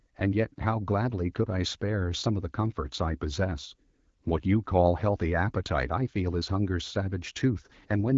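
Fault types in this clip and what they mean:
No faults detected.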